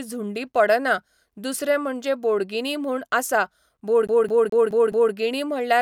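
CD stuck on one turn, from 4.07 to 5.13 s: a scratch sends the laser back one track at the same point on each rotation, so a 0.21 s slice of the speech repeats five times, each jump marked by a brief mute, giving a rapid, even stutter.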